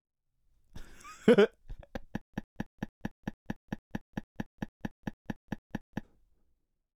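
From 2.21 s to 6.04 s the sound breaks into a stutter with silent gaps. A fragment of about 103 ms plays, then about 122 ms of dead digital silence follows, and the same fragment returns. That gives a steady cycle of roughly 225 ms, heard 17 times. This is likely a stalled player or stream replaying its last buffered piece at each retry before running dry. The audio that belonged in that span never arrives.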